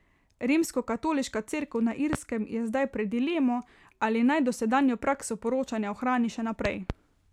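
A speech clip with a loud pop at 2.13 to 2.16 s and a double pop between 6.65 and 6.93 s, each around 15 dB above the speech. The speech continues unbroken underneath, unlike a dropout click, pointing to a likely voltage pulse from a plug, switch or static.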